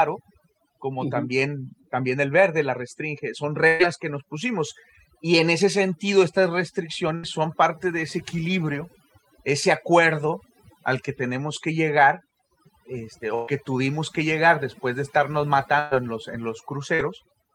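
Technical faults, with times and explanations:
Throughout, overdone noise removal: the background drops and breaks up into twinkling specks. An over-aggressive noise reducer is cutting individual frequency bands it mistakes for noise, taking quieter parts of the speech with them.
3.67–3.82 s, 7.15–7.26 s, 13.35–13.50 s and 15.79–15.94 s, burst of packet loss: each time the last sound is held and fades, then speech jumps ahead. About 120 ms went missing each time (80 ms at 7.15 s), filled by extending prior audio.
16.95–17.02 s, short concealed packet loss: a brief smear or wobble in the speech. About 40 ms failed to arrive in time, so the receiver continued the preceding sound to cover the hole before blending back into the real audio.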